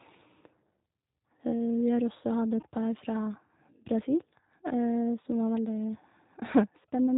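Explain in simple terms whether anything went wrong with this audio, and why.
Yes, a couple of things. The whole clip has been through the G.729 codec, a phone-call codec that rebuilds the voice from a simple model and throws away everything above 4 kHz. That's why the speech sounds muffled, a bit rough and slightly synthetic the whole way through.

There are also two short glitches from VoIP packet loss concealed by the speech codec, at about 2.62 s and from 6.83 to 6.86 s. Each sounds like one tiny missing piece. The decoder guessed its way across it by stretching the last bit of voice, so you hear a brief stretched-out smear rather than a gap.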